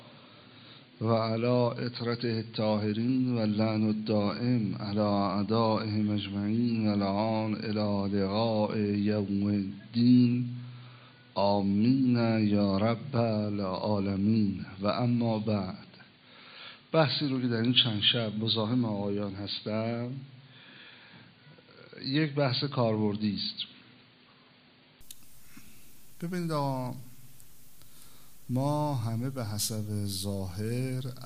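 From the start to 25.01 s the sound is dull and boxy, nothing above 4.6 kHz, with faint added hiss, likely an input switched to a poorer device, then it clears instantly.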